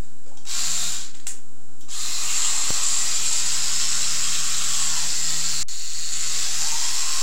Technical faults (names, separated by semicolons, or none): DC offset